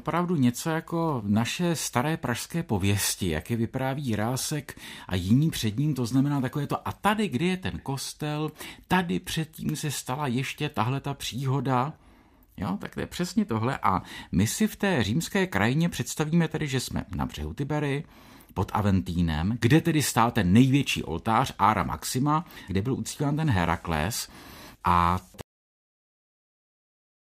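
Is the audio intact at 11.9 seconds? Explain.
Yes, the speech at 11.9 seconds is intact, with no audible fault at that moment.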